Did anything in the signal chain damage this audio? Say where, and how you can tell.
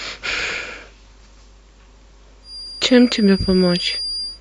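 Yes. From 2.41 s to the end, a thin, steady feedback whistle sits at 4.8 kHz, roughly 10 dB below the speech, swelling and fading slowly in level. This is likely an acoustic loop from loudspeaker back to microphone held just at the point of feedback, in the capture or call path.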